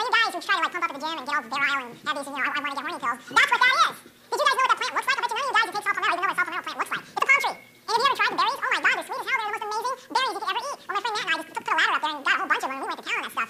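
The audio plays at twice its proper speed for its whole length. Everything is raised a full octave, 12 semitones up. This is audio read two samples at a time, at double speed. The reader treats each pair of samples as a single frame. That suggests it assumed two channels, or samples twice as wide as they really are. Half the data gets skipped, so time is compressed by a factor of 2. Any strong content above a quarter of the sample rate folds back.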